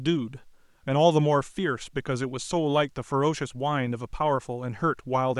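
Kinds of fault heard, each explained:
Nothing stood out as a fault anywhere in the speech on listening.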